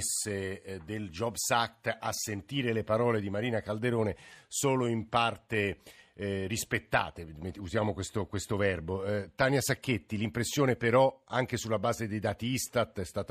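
No technical faults can be heard anywhere in it.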